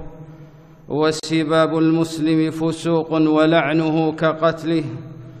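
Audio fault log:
1.20–1.23 s, gap at a join of encoded pieces: the sound drops out for about 37 ms with smeared edges, then resumes where it stopped. Two separately encoded segments were butted together untrimmed, so the encoder's start-up delay and final-frame padding remain as silence.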